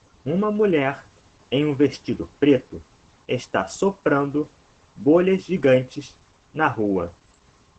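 Opus voice compression runs throughout: nothing above about 8.9 kHz, with hoarse, faintly robotic SILK excitation, unlike a plain low-pass filter. This fits roughly 12 kbps.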